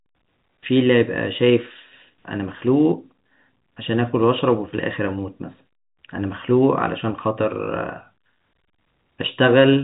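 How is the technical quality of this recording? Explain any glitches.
No glitches can be heard anywhere in the recording. The speech has the narrow, telephone-like sound of G.711 telephone coding, with nothing above about 3.8 kHz, and any coding noise is faint at most.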